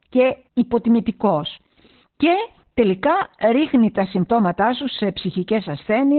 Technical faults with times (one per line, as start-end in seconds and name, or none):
0.00-6.18 Opus voice compression